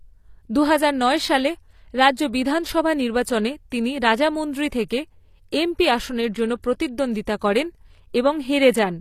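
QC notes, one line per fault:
Throughout, HE-AAC compression: the top end sounds bright but synthetic, with nothing above 14.9 kHz. The treble is likely rebuilt from copied lower bands under a coarse envelope, so harmonics fail to line up across the crossover. The damage is plainly audible, consistent with roughly 24 kbps.
6.63 s and 7.25 s, pre-echo: a short hiss precedes each sharp attack, lasting 12 ms just after "এমপি আসনের জন্য" and 19 ms at the second. Quantisation noise sized for the loud onset spreads across the block into the quiet moment before it, softening the attack.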